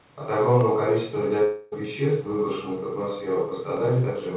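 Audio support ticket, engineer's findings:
Sharp single clicks at 0.61 s and 3.77 s, each a thin vertical line across the spectrum. Dropped samples: a fraction of a millisecond missing from the stream, so the waveform jumps straight to a later value. Far too short to remove audible content.

Buzzy or hissy continuation of the last sound from 1.44 to 1.74 s, decaying without reaching silence, then speech resumes at "веществ выброшенных в". Long network dropout: likely lost packets, about 280 ms of audio never delivered, with roughly 275 ms synthesized by the receiver's concealment. Band-limited to 4 kHz throughout, consistent with a G.711 A-law call path.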